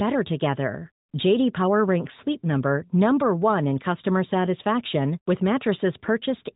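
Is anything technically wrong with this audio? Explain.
No, nothing is technically wrong with this audio.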